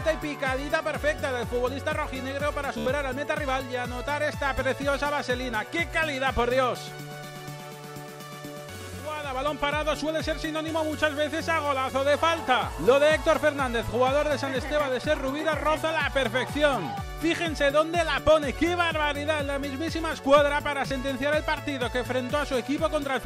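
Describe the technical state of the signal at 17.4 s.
At 17.4 s the signal is intact, with no audible dropout, distortion, glitch or other technical fault.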